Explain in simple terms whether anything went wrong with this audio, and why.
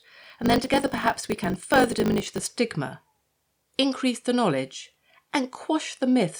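From the start to about 2.46 s, the speech has a steady 50 Hz buzz and runs about 1.07 times too fast while keeping roughly its normal pitch. This is a block size mismatch (truncated). One processing stage hands over chunks of audio that are longer than the next stage takes in, so the tail of every chunk is dropped. The buzz comes from those regular cuts, and the speed-up fits 1024-sample blocks being read about 7% short.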